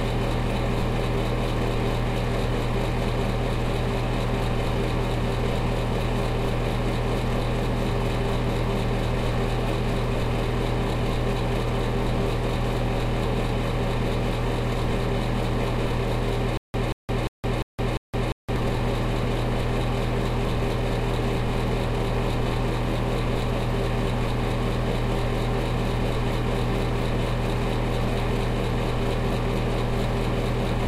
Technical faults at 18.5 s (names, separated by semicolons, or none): stutter with silent gaps